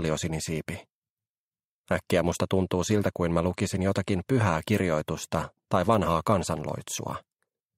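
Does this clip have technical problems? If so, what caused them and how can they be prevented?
No, there are no technical problems in this clip.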